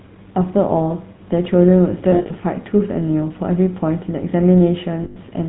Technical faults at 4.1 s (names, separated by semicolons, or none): GSM full-rate codec